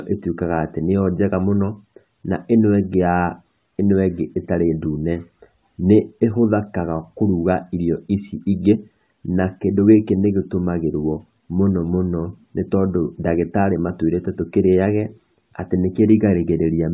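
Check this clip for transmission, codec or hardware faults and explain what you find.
The speech signal holds steady throughout, with no audible interruption, distortion or damage from the transmission path, the coding stage or the recording hardware.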